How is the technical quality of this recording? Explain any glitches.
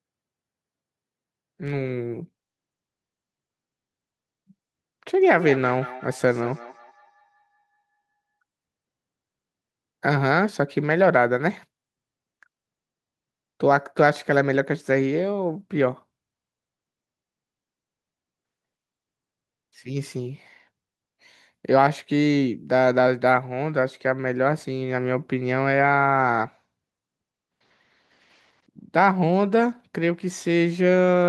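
One glitch stands out. From 5.21 to 8.19 s there is feedback echo between two devices. A second device in the same room is on the call and plays back what this microphone sent, and the microphone picks that playback up again. The echo canceller here removes only its own device's output, so the replayed sound gets through. Each phrase returns roughly a fifth of a second later, thinner and ringing, peaking at about 16 dB below the speech.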